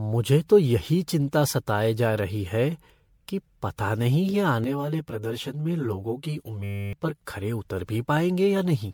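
Speech with generation loss throughout: a swirly, smeared, hollow texture with blurred attacks, more damaged than a single MP3 pass near 96 kbit/s would leave, likely from about seven re-encodings. From 4.64 to 7.22 s, between "कि पता नहीं ये" and "खरे उतर", channel delay (comb filtering) adds a fixed, hollow phasiness. One channel lags by about 10 ms, so mono summing notches evenly spaced frequencies starting near 40 Hz. Unlike codec swirl, these notches stay put. Inside that stretch, from 6.64 to 6.93 s, a system hang loop repeats a 10 ms piece as a steady 100 Hz buzz, replacing roughly 0.3 s of audio. Its exact periodic repetition distinguishes it from a dropout or glitch.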